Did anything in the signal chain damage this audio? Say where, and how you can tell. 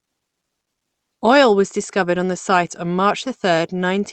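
No, nothing damaged this audio.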